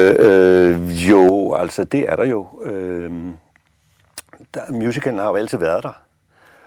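It's a speech clip, and the opening runs into microphone overload from 0.0 to 0.69 s and again from 1.09 to 1.29 s, with peaks pushed about 6 dB and then about 5 dB past the limit, so a small share of samples get flattened and the loud syllables crackle, likely from input gain set too high. You also hear the microphone volume stepped down in sudden drops at 0.28 s (about 2 dB), at 1.29 s just before "altså det er der" (about 6 dB), and at 2.31 s right after it (about 3 dB), likely the call software pulling the input level down after those distorted peaks.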